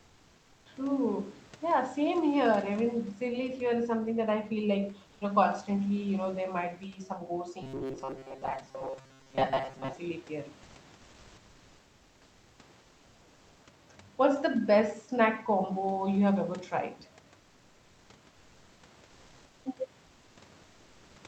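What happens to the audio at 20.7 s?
Transmission likely paused during the silence, so from 20.63 to 21.15 s the receiver fills in comfort noise in place of the background, a flat, featureless hiss about 2 dB quieter.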